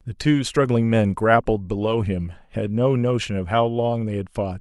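A speech recording with nothing technically wrong with it, so there are no times or causes to give.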